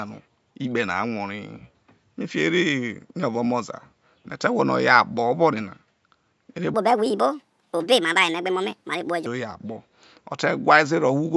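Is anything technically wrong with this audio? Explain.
Yes. From 6.74 to 9.26 s there is a wrong sample rate fault: the samples are run out 1.5 times faster than they were captured, which fits 16 kHz audio played at 24 kHz. With no conversion, speed and pitch rise together, so the speech turns high and hurried, up about 7 semitones. On a spectrogram, harmonics and formants jump upward by that ratio and syllables compress in time. The waveform shows tighter, shorter cycles for the section.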